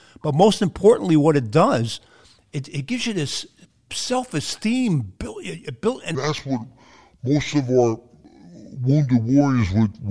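From 6.15 s, after "built and", a wrong sample rate makes the speech drop to 0.69 times speed, about 6.5 semitones lower, consistent with 32 kHz audio played at 22 kHz.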